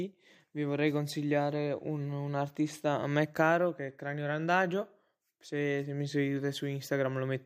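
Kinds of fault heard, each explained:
Nothing to flag here: listening closely, no technical faults turn up anywhere in this bit of speech.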